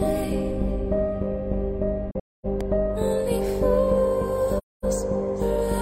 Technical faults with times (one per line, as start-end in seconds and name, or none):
2.11-2.46 AAC frame loss with muting
2.61-2.63 loud pop
4.58-4.84 AAC frame loss with muting